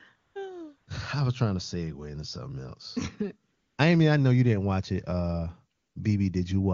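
AMR comfort noise replaces the real background at 0.15–0.35 s, 0.77–0.87 s, 3.51–3.77 s (after "segue into something else") and 5.75–5.95 s. During these pauses the phone stopped sending speech frames, and the receiver filled the gaps with a steady, synthetic hiss. On a spectrogram these stretches appear as flat, smooth noise bands with abrupt edges.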